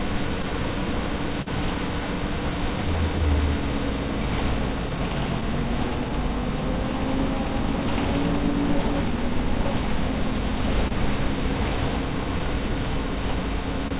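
Right from the start there's clock drift between sender and receiver: the sender's clock runs roughly 2% slow, so the jitter buffer keeps draining and the receiver has to pad things out. You get small, unevenly spaced timing hiccups through the whole clip, all heard through a narrowband call path with nothing above 4 kHz.

Between 0.42 and 1.48 s there are scattered short gaps, about three late or lost packets patched by carrying the last sound forward. That's around 70 ms filled in total, the longest near 40 ms, so you hear brief smears or ticks. The same thing comes back from 4.40 to 6.92 s as about five tiny patches, none longer than about 10 ms, and again from 9.90 to 10.93 s as roughly three, the longest about 30 ms.

From 3.13 to 13.54 s you get repeated timing corrections. The receiver keeps repeating slivers of audio to keep up with the slow sender, playing at about 99% speed and adding around 100 ms overall. 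It comes across as slight hiccups and a faintly unsteady pace rather than anything obvious.

Right at the end, 13.88 to 13.93 s, there's a short stall from a late packet. The buffer ran dry, and the receiver held the last sound for 28 ms until the packet turned up, so that bit lingers a touch with a faint buzzy dip.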